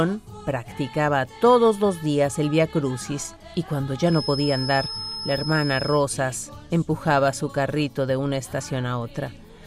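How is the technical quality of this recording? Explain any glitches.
A feedback whistle runs from 4.02 to 6.07 s: a thin, steady 5.2 kHz tone, roughly 10 dB under the sound, likely from a loudspeaker-to-microphone loop held just short of runaway feedback, swelling and fading slowly in level.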